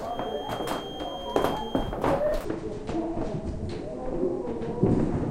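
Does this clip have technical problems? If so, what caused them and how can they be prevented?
Yes. A feedback whistle runs from 0.0 to 2.0 s: a thin, steady tone at 3.2 kHz sits behind the sound, roughly 15 dB below it. The likely cause is a loudspeaker-to-microphone loop hovering just under the point of feedback, so one frequency keeps ringing without growing into a howl. To prevent it, lower the monitor gain, move the microphone away from or off-axis to the loudspeaker, or notch out the ringing frequency.

A section at the wrong speed begins at 2.45 s and lasts to the end of the clip at 5.30 s. This part plays at 0.59 times its original speed, so it is slowed and its pitch drops by close to ten semitones, with speed and pitch falling together. The likely cause is that this stretch was edited or played back against the wrong clock, stretching it in time. To prevent it, make sure every source and the editing session share the same sample rate and clock settings before joining sections.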